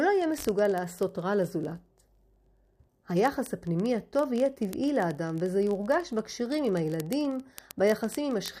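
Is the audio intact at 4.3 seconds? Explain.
No. Word clock ticks run from 0.11 s to 8.58 s, covering 4.3 s. The receiving device drifts about a thousand parts per million from the sender's clock, slipping one sample roughly every 20 ms, so the speech carries a steady ticking near fifty per second.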